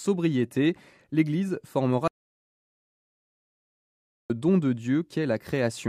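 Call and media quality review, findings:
Audio dropout to silence, 2.08 to 4.30 s: sound cuts off abruptly, about 2.2 s of silence with no room tone, resumes mid-flow. Content in gap lost. Likely input loss upstream (device disconnect, link failure or mute) while encoder kept writing silence.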